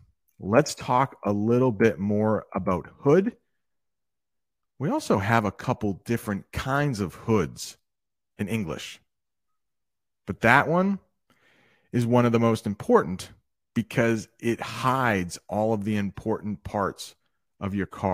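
Speech, with no technical faults audible anywhere.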